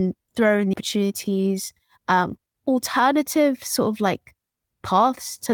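At 0.73 s the audio makes a skip ahead: roughly 0.7 s of speech is discarded and playback joins the two sides almost seamlessly, with no silence inserted. Unlike a dropout, there is no gap, only an abrupt jump that swallows speech.

From 0.95 s to 4.35 s a jitter buffer speed-up takes hold. The receiver trims repeated pitch-period slices to shrink excess delay, running the speech at 109% and removing about a third of a second. Pitch stays unchanged, unlike resampling, and the loss is spread out rather than one cut.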